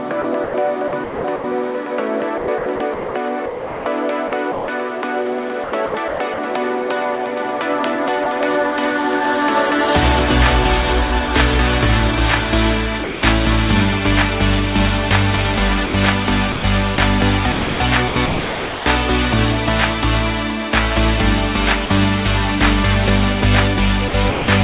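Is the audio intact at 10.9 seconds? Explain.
Yes, the audio is intact at 10.9 s, with no dropout, glitch or distortion there beyond the steady telephone-band sound of the call path, which carries nothing above 4 kHz.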